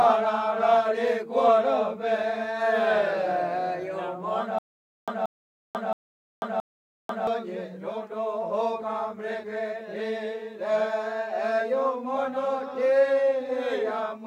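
From 4.59 to 7.27 s there's a stutter with silent gaps: a 180 ms burst repeats four times, with 490 ms of dead silence between, likely a stalled stream retrying.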